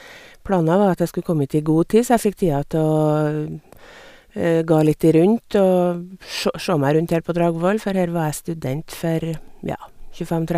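No technical faults are audible.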